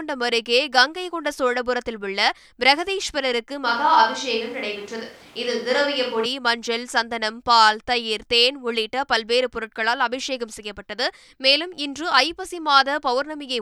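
At 3.66 s the speech abruptly turns roomy and hollow, losing bass, and at 6.25 s it snaps back to the close, full sound just as suddenly. This is likely a switch to a distant microphone, with the close microphone's signal dropping out and a farther one, such as a camera's, filling in. The loudness stays about the same. Room noise sits well below the speech. The sudden swap in both directions sets it apart from a gradual change in position.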